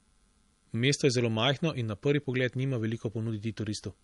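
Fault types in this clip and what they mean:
Low-bitrate audio saved at a high bitrate: the speech has nothing at all above about 11.1 kHz, and the smeared, swirly artefacts of heavy MP3 coding run through all of it. That's likely an MP3 made at something like 48 kbit/s and later re-saved at a much higher rate such as 192 kbit/s. The bigger file can't bring back the top end or clean up the damage the first pass did.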